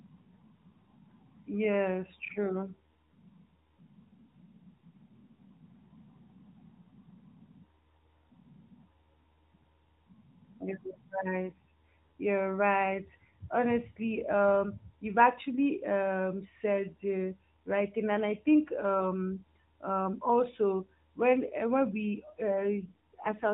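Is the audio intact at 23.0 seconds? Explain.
No. An AMR rate drop runs from 22.52 s to 23.53 s. The speech stays narrowband with no gap but turns buzzier and more synthetic, which fits the codec stepping down from 12.2 to 5.9 kbps to spend bits on error protection over a weak link.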